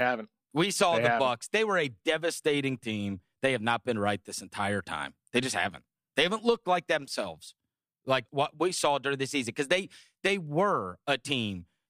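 From about 0.43 s right through to 11.49 s there's a train of clock slip clicks, faint ticks roughly every 0.4 s, around thirty in all, sharpest on the louder speech and gone in the pauses. It's likely two devices free-running on separate clocks, drifting apart by something like 50 parts per million, so every time the gap adds up to a full sample, one sample gets dropped or doubled and you hear a tiny tick.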